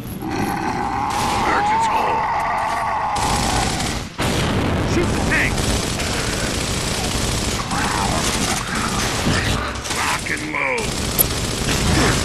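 From the start and running through the whole clip, a filter restarted on every block leaves a steady buzz at about 172 Hz, which fits a 256-sample block. Each block's filter begins again from silence, so a tiny transient is stamped at every boundary, and those repeat as a fixed-pitch tick-buzz whose strength rises and falls with the sound's level. Unlike a mains hum, it fades with quiet passages and doesn't hold steady underneath.

At 11.18 to 11.22 s, damaged data in a compressed stream produces a short glitch lasting about 34 ms. Bytes in the encoded stream were corrupted, so the decoder misread those frames, lost sync and hunted for the next valid frame header before resuming. It is a single isolated event, not periodic.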